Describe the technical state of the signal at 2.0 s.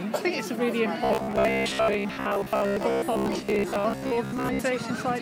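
At 2.0 s the signal sits inside a stretch of robotic sound from repeated short buffers, running from 1.04 to 4.61 s. The likely cause is audio arriving too seldom, so a segment of about 15 ms is replayed over and over while real audio is skipped, for most of the span. That imposes a rigid 66.8 Hz metallic buzz. A spectrogram shows evenly spaced harmonic lines at multiples of 66.8 Hz, and the waveform shows near-identical cycles repeating.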